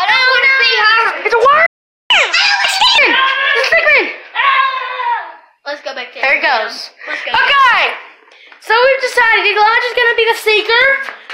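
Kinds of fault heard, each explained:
Playback stall: The sound cuts to silence mid-flow at 1.66 s and stays silent for about 0.44 s, resuming at 2.10 s. The output was likely starved of data, or its playback thread was briefly blocked, so nothing reached the output.
Catch-up at higher speed: From 2.10 to 2.98 s the audio runs 1.5 times too fast, with pitch raised by roughly seven semitones. The backlog from the stall is being resampled faster to recover lost time, then speed and pitch drop back to normal.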